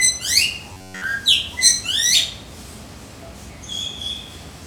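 From 0.73 to 1.04 s the sound becomes a rigid metallic buzz at 93.8 Hz. This is robotic sound from repeated short buffers, likely a chunk of about 10.7 ms replayed throughout. A spectrogram shows evenly spaced 93.8 Hz harmonics, and the waveform shows one identical cycle repeating.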